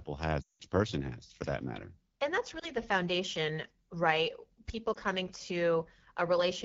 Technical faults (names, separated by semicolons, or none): AMR wideband (HD Voice) codec; lost AMR speech frames